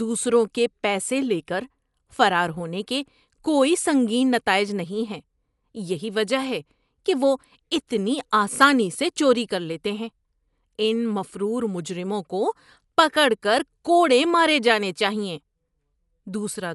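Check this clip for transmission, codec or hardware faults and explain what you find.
There's one codec fault here, running through the whole speech clip. Nothing gets past about 11.4 kHz, so it sounds dull, with rough, fluttering noise around the voice. That's likely Dolby Digital compression, consistent with a low bitrate near 64 kbps: band narrowed, starved frequency lines refilled with dither noise.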